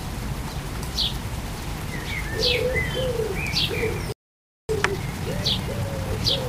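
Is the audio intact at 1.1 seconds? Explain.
Yes, the audio is intact at 1.1 seconds, with no fault of any kind at that moment.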